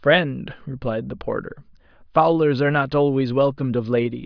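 Speech, with no audible technical fault anywhere in the recording.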